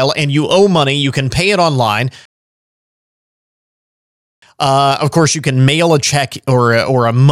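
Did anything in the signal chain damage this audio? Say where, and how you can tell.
Yes. A rebuffering stall at the playback stage interrupts the speech from 2.25 s to 4.42 s: the sound drops to silence and then picks up exactly where it left off, adding about 2.17 s to the clip. The player ran out of downloaded audio and waited for more to arrive. What separates this from a network dropout or packet loss is that no speech is missing or concealed. The stream simply pauses and continues intact.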